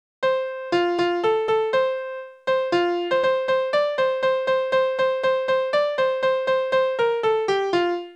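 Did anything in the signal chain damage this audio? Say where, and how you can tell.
No, nothing in the signal chain stood out as damaging this audio on listening.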